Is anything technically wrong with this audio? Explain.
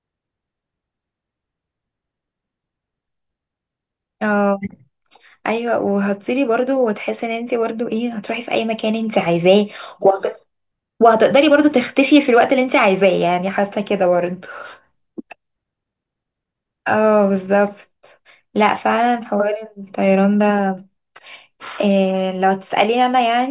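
No, nothing is technically wrong with this audio.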